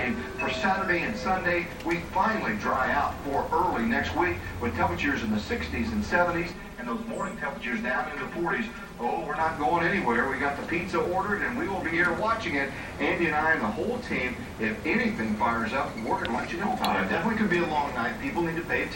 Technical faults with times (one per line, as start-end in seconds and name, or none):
6.53-9.41 channel delay (comb filtering)